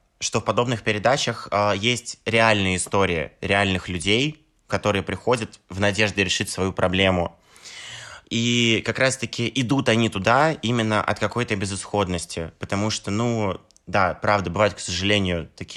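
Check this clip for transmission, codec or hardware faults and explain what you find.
Nothing in the speech signal points to trouble in its transmission path, its encoding or the equipment that captured it.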